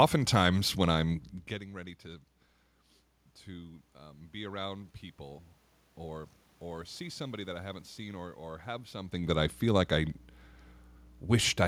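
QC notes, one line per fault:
Throughout: mains hum. A steady low tone at 60 Hz, the power-line frequency, runs under the speech at roughly 20 dB below it. Electrical power has leaked into the signal path, most plausibly through a ground loop or from a transformer near the cabling. The hum holds its level even where the speech itself gets quieter or louder around 1.5 s and 9 s as the talker shifts position.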